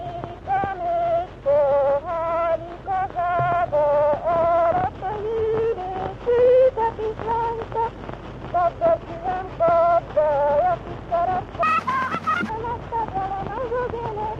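From 4.65 to 4.81 s there is DAB burbling: weak reception let a small fraction of bit errors slip past error correction into the MP2 data, so individual sub-bands leap in level frame by frame, giving short blips of noise over the sound.

From 11.63 to 12.49 s a section plays at the wrong speed, running 1.9 times too fast, so the audio turns high and hurried, raised by nearly ten semitones. This likely comes from an editor or player fitting that segment to the wrong clock.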